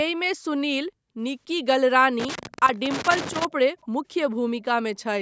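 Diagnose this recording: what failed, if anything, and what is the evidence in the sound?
A worn contact in the analogue wiring kept making and breaking the line from 2.20 to 3.45 s, chopping the speech into irregular loose connector crackle.

Echo leak in the call processing, likely an echo canceller missing some loudspeaker pickup, sends back faint speech copies 288 ms late, at 2.74–2.79 s and 3.81–3.87 s.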